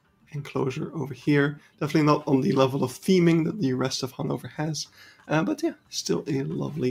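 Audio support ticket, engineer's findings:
Noise suppressor applied to music or sounds, present for the whole clip. Level wanders by roughly 5 dB as the suppressor keeps reclassifying steady content as noise. Sustained parts and decays get pulled down. Onsets pass largely intact. Net effect: audible pumping and a thinned, unsteady body. Probable component: a speech-tuned denoiser left active in the chain. Mechanism: stationarity-based noise estimation treating held tones and ambience as background.

Sound cut by the noise suppressor at four points: 0.04–0.34 s (dip about 12 dB), 1.6–1.81 s (about 11 dB), 4.87–5.29 s (about 10 dB), 5.75–5.92 s (about 12 dB). Each lasts a few tenths of a second. Sinking level, truncated tails. Same denoiser. Gain reduction clamps down where content briefly resembles steady noise.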